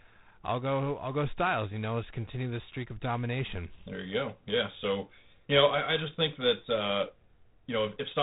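Throughout the speech, G.726 ADPCM damage is plainly audible: a harsh, rasping hiss that swells and shrinks with the speech level, and nothing above about 3.9 kHz. The coarse quantisation fits 24 kbit/s. Unlike perceptual codecs, it adds no warbling or swirling artefacts.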